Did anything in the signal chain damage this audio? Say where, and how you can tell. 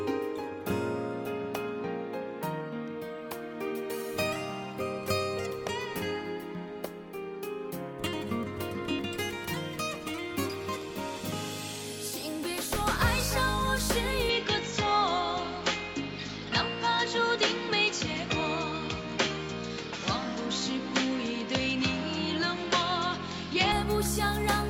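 Yes. From 14.29 s to 23.72 s the sound narrows with nothing above 7.6 kHz, and a new noise floor sits roughly 35 dB below the signal, with no gap and no level jump at either edge. This points at the capture stage, likely an input switched to a poorer device with a narrower passband.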